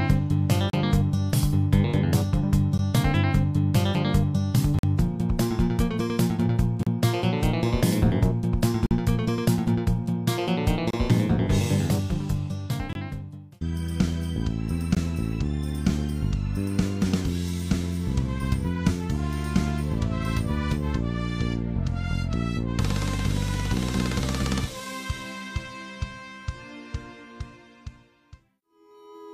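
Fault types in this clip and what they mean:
Gap between stream segments: timestamps of 2-second segments leave silent holes of 14 to 46 ms, shown as flat waveform lines and blank vertical spectrogram stripes.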